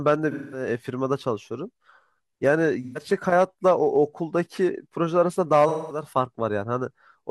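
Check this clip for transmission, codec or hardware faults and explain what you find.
Yes, there is one codec fault: AAC frame loss with concealment, at 0.31–0.67 s, 2.83–3.02 s and 5.68–6.05 s. The decoder lost blocks of about 0.21 s, 0.13 s and 0.21 s, which fits runs of five, three and five frames, and filled each gap by reusing the last good spectrum. The result is a smeared, noisy, phasey patch in the speech.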